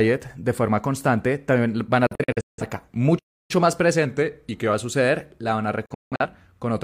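At 2.07 s, just after "forma constante también van", a digital broadcast dropout occurs. The receiver stopped getting usable frames and muted its output until clean ones returned. The speech breaks into several short holes between 2.07 and 2.63 s, about 341 ms of gaps scattered over 512 ms, with the longest single gap at 171 ms. Each cut fades in about 3 ms, so it sounds abrupt. The gap pattern suggests a handful of frames were discarded, and the speech sent during those holes is gone for good.

From 3.18 to 3.51 s there is a playback stall, most likely the player running short of data or being blocked. The output goes completely silent for 307 ms mid-flow before the speech resumes.

Between 4.06 and 4.74 s a drift correction step is heard. The likely cause is clock-matching software changing the playback rate in a single jump to rebalance its buffer. Speed drops by 5.4% and pitch falls by about 97 cents, close to a full semitone. 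The speech sounds slower and audibly flat for those 0.68 s, then snaps back to normal.

A second digital broadcast dropout begins at 5.86 s, right after "van a". Again the receiver muted on failed frames, leaving about 256 ms of holes spread over 341 ms until 6.26 s. The longest gap is again 171 ms, and the cuts are equally sharp.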